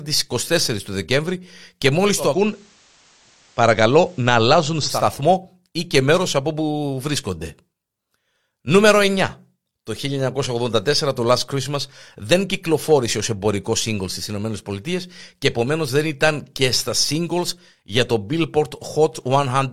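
From 2.16 s to 5.10 s the receiver is blending from digital radio to analogue FM over a 310 ms cross-fade. Faint hiss rises well below the speech, and level shifts about 1 dB, unlike a plain bandwidth drop, which adds no hiss.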